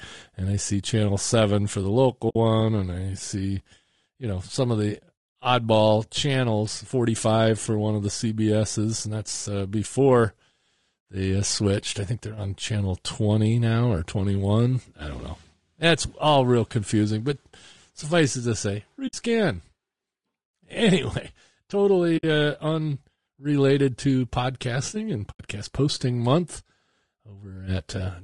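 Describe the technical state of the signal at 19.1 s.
At 19.1 s, right after "suffice it to say", the speech drops out from 19.07 to 19.14 s. That's AAC frame loss with muting: the decoder zeroed roughly three frames, and the overlapping windows fade out and back in, leaving a soft hole. Underneath, the voice is plainly rough and grainy throughout, likely low-delay AAC compression (AAC-ELD), which fits a bitrate around 32 kbps.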